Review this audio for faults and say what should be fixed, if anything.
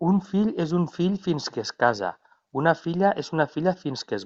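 No faults heard in the speech, so nothing needs fixing.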